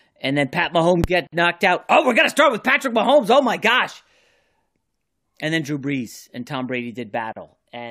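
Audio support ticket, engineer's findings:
Gap at a join of encoded pieces, 1.27 s, 55 ms, just before "knocked out". Hard silence cut into continuous speech, edges smeared by the codec, speech resumes where it stopped. Separately encoded segments joined untrimmed; encoder start delay plus last-frame padding retained.

Same fault, 7.33 s, 37 ms. Spacing of 6.0 s points to fixed-length encode chunks at the segmenter or concatenation stage.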